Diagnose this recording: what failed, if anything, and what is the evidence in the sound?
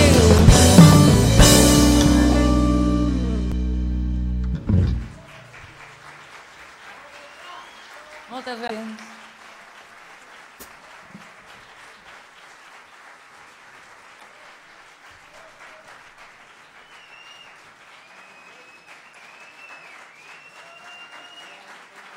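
The codec stage failed here, with damaged data in a compressed stream. There are five short disruptions, each 0.04 s long, at 0.36, 3.49, 8.66, 14.17 and 19.11 s. Corrupted bytes made the decoder misread those frames, lose sync and hunt for the next frame header.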